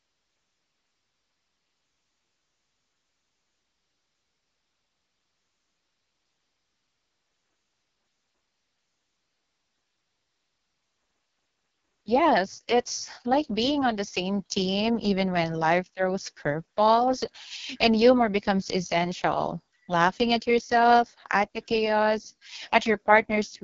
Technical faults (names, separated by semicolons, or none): AMR wideband (HD Voice) codec